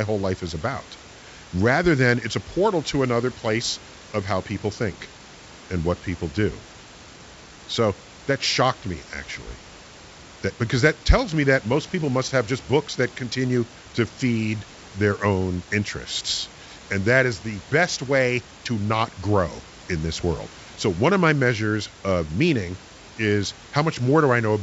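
Nothing stood out on listening to this speech clip.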